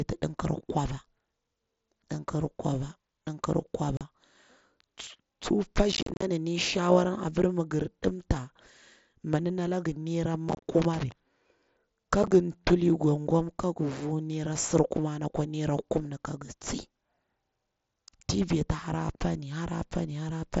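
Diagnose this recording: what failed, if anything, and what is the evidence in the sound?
Unconcealed Bluetooth headset packet loss on the wireless link between headset and phone, carried by the mSBC codec. Holes appear at 3.97–4.01 s, 5.92–6.22 s (about 188 ms missing across 300 ms), 10.49–10.63 s and 12.23–12.32 s. Nothing fills the lost audio, so the sound chops, with abrupt cut edges. On the waveform these are flat or idle stretches with square edges. On a spectrogram they are blank vertical stripes. Run lengths in 7.5 ms steps fit lost mSBC frames.

Loose connector crackle sits in the analogue wiring, at 10.82–11.12 s, just after the third cluster of losses. A worn or dirty contact makes and breaks rapidly as it shifts, chopping the signal into an irregular, scratchy burst unlike the clean gaps of the packet loss. On the waveform it shows as jagged dropouts and spikes at uneven spacing. 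A spectrogram shows scattered full-height vertical lines with no regular rhythm across those 0.3 seconds.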